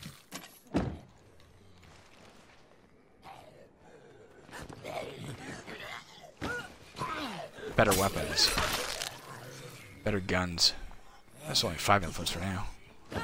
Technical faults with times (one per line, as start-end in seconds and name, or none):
8.83-9.08 cable scratch noise